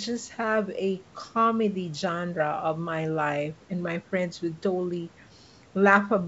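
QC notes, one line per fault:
Nothing to flag here; the speech comes through a call's microphone processing and a WebRTC call path, and the sound tops out at 8 kHz, just as you'd expect from a G.722 wideband link.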